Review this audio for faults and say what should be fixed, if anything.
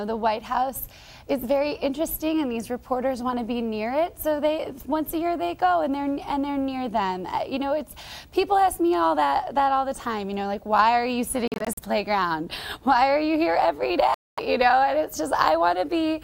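Audio packets were likely arriving at the Bluetooth headphones too late and being dropped, producing Bluetooth dropouts. From 11.48 to 11.79 s, about 150 ms of sound vanishes in short gaps (longest 43 ms). From 14.14 to 14.40 s, about 235 ms is lost. Each time, playback resumes further along, as if it had kept playing. To prevent this, keep the headphones close to the source with a clear path, and reduce 2.4 GHz interference or pick a more robust codec setting.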